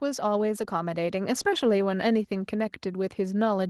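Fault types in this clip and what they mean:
Automatic gain rising: the level control judged the incoming speech too quiet and pushed its gain up gradually, by about 6 dB, from 0.05 s to 1.51 s. Voice and background noise swell together over roughly a second and a half. That shared, smooth climb sets it apart from someone moving closer, where the noise floor would stay put, and from a sudden gain step, which would jump rather than ramp.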